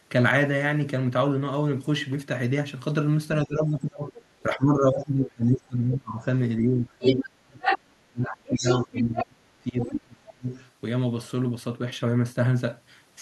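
It's a speech clip with two overlapping echo-canceller problems. Speech suppressed in double talk hits from 3.45 to 6.26 s and again from 6.58 to 10.48 s. The talker keeps dipping and dropping out, by roughly 25 dB at worst in the first stretch and about 35 dB in the second, over a few seconds in total. The likely cause is the canceller ducking everything while both ends talk at once. Meanwhile the other side's voice is leaking through at 4.16–4.43, 7.02–7.28, 7.6–7.88, 8.23–9.24, 9.78–9.88 and 10.51–10.6 s. It's faint at first, then around 7 to 8 s as loud as the talker or a touch louder, fading out again by the end. That's likely loudspeaker echo the canceller didn't fully remove.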